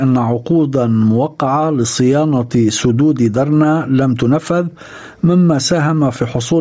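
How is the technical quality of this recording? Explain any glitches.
The main problem is gain pumping that runs through the whole clip. The level swings by around 10 dB, likely because the input gain is set far too high and a fast limiter clamps down on every loud sound. Loud and soft parts end up closer in level, so the audio sounds squashed. On a waveform the envelope looks flattened, with the quiet stretches lifted. The call-style microphone processing also leaves an empty band above 8 kHz.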